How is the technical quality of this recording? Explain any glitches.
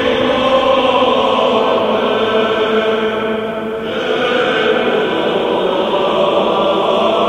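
No technical faults are audible.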